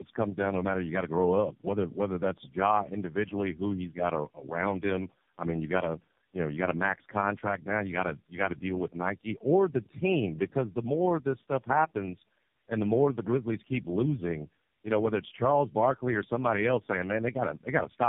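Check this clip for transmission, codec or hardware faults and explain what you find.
One transmission fault runs through the whole recording: tandem speech coding. The speech sounds like it passed through several low-rate speech codecs in a row, each one decoded and re-encoded at a network boundary. Every coder modelled the errors of the one before, so the roughness, muffling and warbly, watery texture build up beyond what a single codec would cause. The character fits roughly three narrowband coders ending in something AMR-like. On a spectrogram, nothing appears above 3.6 kHz, and the harmonics look smeared and unsteady.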